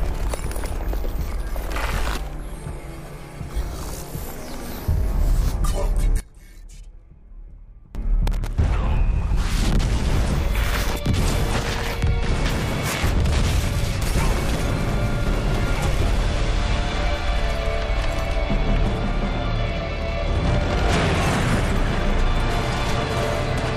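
From 6.20 to 7.95 s the whole sound drops by about 21 dB, background included. The waveform shrinks sharply, likely from one channel inverted cancelling in the mono sum. Loose connector crackle follows at 8.27 to 8.48 s and 14.49 to 14.57 s. These are irregular bursts of scratchy pops from a contact making and breaking, seen as jagged spikes and vertical broadband streaks.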